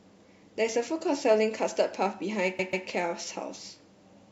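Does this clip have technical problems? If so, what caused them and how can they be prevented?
Yes. Sample clock jitter runs through the whole speech clip as a fine hiss and roughness riding on the signal. It grows on loud and bright passages and drops away in the pauses. The converter's clock wanders by well under a microsecond, so each sample is taken slightly early or late. Steep, fast-changing parts of the waveform turn that timing error into an amplitude error, here about 45 dB below the signal. Prevent it by clocking the converter from a clean, low-jitter reference with a stable power supply.

Repeated frames appear between 2.58 and 2.86 s as a stutter. A 139.3 ms block of audio plays twice more after it first sounds. A block of that length points to a run of about six compressed frames being written or transmitted again. The decoder faithfully plays each copy, so the clip grows by 278.6 ms. 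Prevent it with sequence numbering or timestamp checks that drop duplicate frames before decoding.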